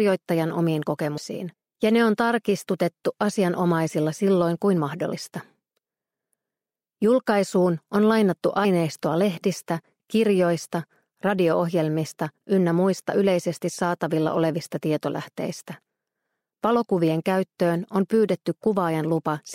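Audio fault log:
1.17, 5.11, 8.64 s: compressed frames skipped. Dropped frames, consistent with a 26 ms frame length, make the audio jump ahead about 150, 70 and 50 ms.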